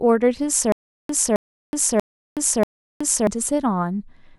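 From 0.72 s to 3.27 s the speech breaks into a stutter with silent gaps. A 266 ms fragment plays, drops into 371 ms of dead silence, then returns, repeating four times on a steady 637 ms cycle, while the speech that belonged in that span never arrives. The likely cause is a stalled stream replaying its last buffered fragment at each retry. On a waveform and spectrogram, identical blocks alternate with flat, silent gaps.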